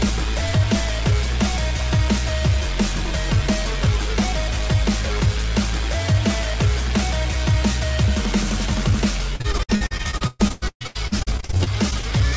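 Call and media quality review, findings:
Repeated packet loss (robotic sound), 9.36–12.19 s. Dozens of short dropouts, longest about 130 ms. Jitter buffer concealment stretches the last audio across each hole, so roughly 40% of the span is filled sound: choppy, pieces missing. Band-limited above 8 kHz throughout, consistent with G.722.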